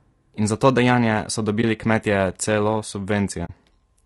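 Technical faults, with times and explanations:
Throughout: low-delay AAC compression. The speech sounds rough and grainy, with noise filling the gaps between harmonics and a thin, synthetic-sounding top band. This is likely AAC-ELD at a low bitrate, around 32 kbps, where short frames resolve pitch harmonics poorly.
1.61–1.64 s and 3.45–3.50 s: AAC frame loss with muting. Just after "za to dejanje so", the sound drops out briefly, and again for about 50 ms later. The missing spectrum was zeroed, and overlapping windows fade it out and back in, leaving a brief dip and then a soft-edged hole.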